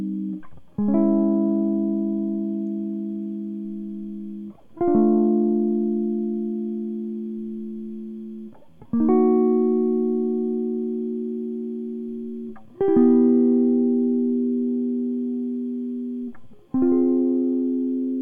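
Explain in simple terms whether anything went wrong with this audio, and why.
Nothing went wrong with this music recording.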